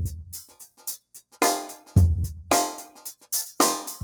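From the start and through to the end, a noise suppressor meant for speech is acting on material that is not speech. It treats sustained, steady components and decaying tails as noise and pulls them down, while sharper onsets pass mostly intact. The gain reduction moves by around 5 dB as the processor changes its mind about what is noise, so the level pumps and the sound loses body, with its held parts thinning.

Between 0.44 and 1.38 s, the sound is cut by the noise suppressor more heavily than elsewhere. Here the processor classified the sound itself as noise and attenuated it, reaching a deepest drop of about 14 dB. Across roughly half a second of that span, steady or fading portions sink noticeably and tails are truncated, while transients survive. The result is an audible dip and a hollow, clipped decay.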